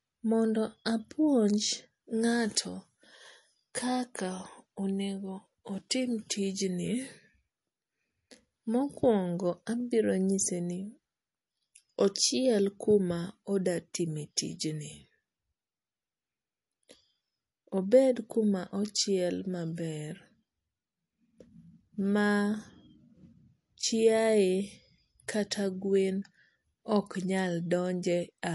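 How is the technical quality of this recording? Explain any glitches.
The speech carries clearly audible compression damage for its whole length, with no separate dropouts or clicks. The recording has likely passed through MP3 compression, and the strength of the damage fits a low bitrate of about 48 kbps. Short of bits, the encoder removed everything above 11.3 kHz and dropped weaker frequency lines that flicker between frames, which gives the speech a dull top with a watery, swirling texture and metallic chirps on sibilants.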